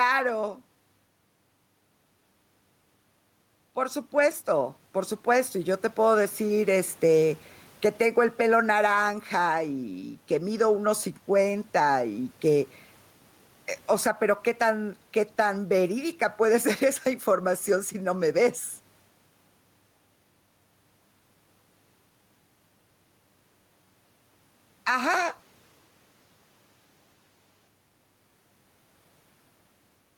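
Gain pumping runs throughout the speech: the gain swings by around 10 dB, likely from excessive input gain driving a fast limiter.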